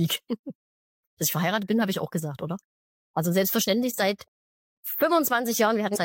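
At 5.92 to 5.98 s, damaged data in the compressed stream makes the decoder lose frame sync, giving a brief glitch, seen as a narrow disruption on the spectrogram.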